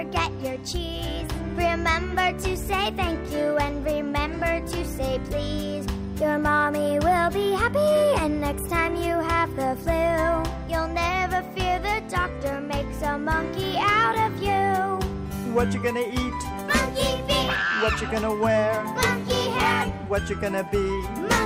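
Nothing goes wrong here; there's no technical fault anywhere in the audio.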